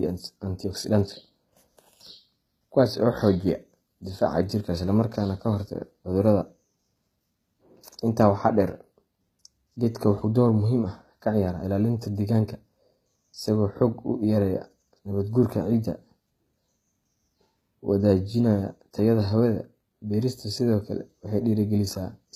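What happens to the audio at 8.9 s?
At 8.9 s the speech carries the same HE-AAC compression damage heard across the whole clip, likely from encoding at a rate near 20 kbps. The upper band is rebuilt from copied lower bands, so sibilants sound gritty, metallic and lispy.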